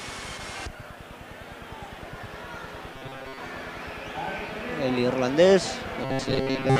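From 2.94 to 3.38 s and again from 6.05 to 6.80 s, the sound turns into a rigid metallic buzz at 133 Hz. This is robotic sound from repeated short buffers: audio likely arrived too seldom, so a roughly 7.5 ms chunk looped, replacing most of the real signal.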